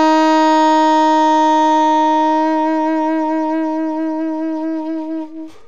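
No technical faults can be heard anywhere in the audio. Nothing in it needs a timestamp or a closer listen.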